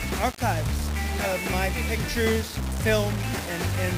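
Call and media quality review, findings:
Grainy, signal-following distortion throughout; quiet passages sputter or drop out. Likely low bit depth without dither: 4-bit rounding, error about 10 dB below signal.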